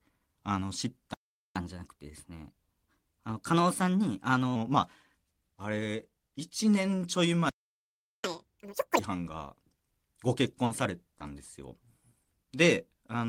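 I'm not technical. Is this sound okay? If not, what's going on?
No, the recording has a few clear delivery problems.

Playback stall: the sound cuts out mid-flow twice, from 1.14 to 1.56 s (about 0.42 s of silence) and from 7.49 to 8.24 s (about 0.75 s). Each time it resumes where it left off. The likely cause is the player running short of incoming data, or being briefly held up, so it has nothing to play until it recovers.

Catch-up at higher speed: after each stall the player hurries through the audio that piled up during the pause. From 1.56 to 4.56 s it runs 1.1 times faster, which raises the pitch slightly. From 8.24 to 8.99 s it runs twice as fast, and the pitch jumps much higher, close to an octave, before settling back to normal.

Burst of packet loss: from 10.65 to 10.71 s, about 50 ms of audio never arrived. The receiver covered the hole by stretching out the last bit of sound it had and fading it down, which comes across as a brief held buzz or hiss. 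The sound then continues slightly further along, with that short stretch gone.

Short concealed packet loss: two smaller gaps follow, at 10.83 to 10.85 s (about 10 ms) and 11.18 to 11.21 s (about 20 ms). Each was patched over by the receiver, which continued the preceding sound and then blended back into the real audio. These are heard as a quick smear or wobble, and a very short sound inside the gap can drop out entirely.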